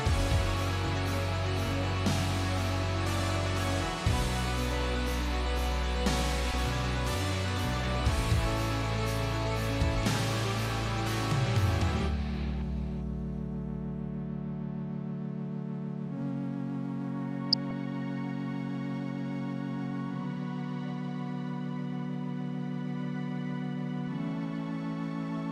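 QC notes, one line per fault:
6.51–6.55 s: DAB burbling. A brief patch lasting about 40 ms, which points to roughly three MP2 frames hit. A small fraction of bit errors, around a few tenths of a percent, slipped past error correction and corrupted samples, putting short blips of noise in single sub-bands.
17.53–17.72 s: DAB burbling. The same burbling, longer at about 0.2 s, consistent with around ten frames damaged by residual bit errors at a similarly low rate.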